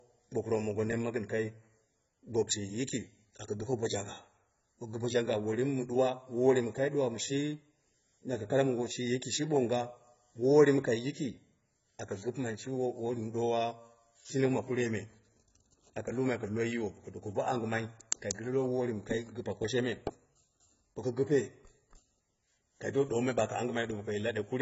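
A speech recording, dull and smeared throughout, with a warbling, fizzy texture on sustained sounds and sibilants and nothing above about 7.7 kHz. The likely cause is heavy AAC compression, whose damage fits AAC-LC at a very low bitrate, around 16 kbps.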